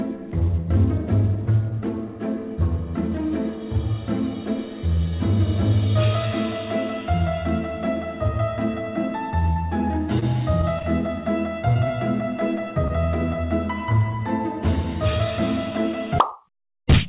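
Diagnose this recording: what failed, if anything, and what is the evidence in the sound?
The network dropped single packets four times, and the receiver's concealment covered each hole. This is short concealed packet loss, heard at 9.53 to 9.57 s, 11.74 to 11.77 s, 11.87 to 11.92 s and 12.88 to 12.91 s. Each gap is about 20 ms, which fits one lost packet. The decoder extended the preceding sound across the hole and blended back, leaving a brief smear or wobble, within audio already band-limited to 4 kHz by the G.711 call codec.

From 10.19 to 10.85 s the network lost packets repeatedly, producing repeated packet loss with a robotic sound. Four holes fall inside those 0.66 s, none longer than 22 ms, and concealment fills roughly a tenth of the stretch. Because each patch repeats the last waveform and another hole arrives soon after, the passage turns choppy, with small pieces missing rather than one clear dropout.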